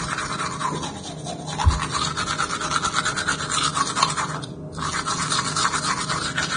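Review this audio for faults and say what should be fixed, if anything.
Throughout the clip the audio is hissy and grainy, with roughened tones and softened attacks, and nothing is present above 9.7 kHz. This heavy damage is likely Vorbis compression at a low bitrate, which fits a rate of roughly 25 kbps. The encoder keeps a smooth spectral envelope but quantises the upper residue so coarsely that fine detail is replaced by noise of similar energy. On a spectrogram this shows as a hard ceiling at 9.7 kHz, with blotchy, speckled texture below it instead of clean harmonic lines. On the waveform, transients look smeared rather than sharp. To prevent it, export from the original source at a much higher Vorbis quality setting or in a lossless format.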